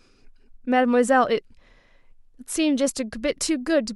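No technical faults can be heard anywhere in this recording. The speech carries on without any break or disturbance in the signal.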